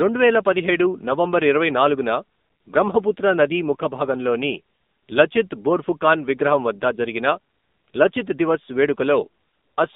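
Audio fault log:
Throughout, AMR narrowband mobile codec. The band runs only from 200 Hz to 3.7 kHz. Speech sounds plainly buzzy and synthetic, which fits a 7.4 kbps mode.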